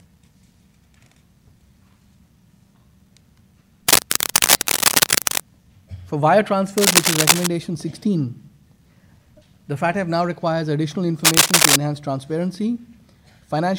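Cable scratch noise breaks in three times: from 3.88 to 5.40 s, from 6.77 to 7.47 s, and from 11.25 to 11.78 s. Each burst is a dense, ragged scratching and rustling. It sits a little louder than the sound beneath it. The likely cause is a worn cable, connector or control being moved. Its contact resistance jumps about rapidly, and that injects uneven noise straight into the signal.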